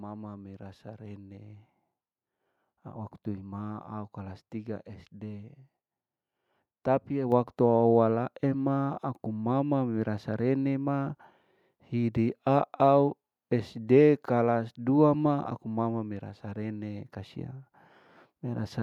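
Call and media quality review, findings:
Microphone volume stepped up at 7.32 s: speech and background noise rise together by about 4 dB in a single step. Points to the call software's input gain control raising the device's microphone level after judging the input too quiet.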